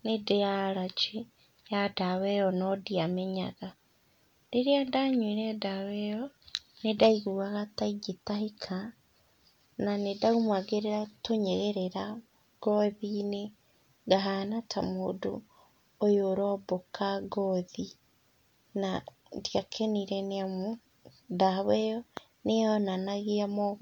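No technical faults are audible.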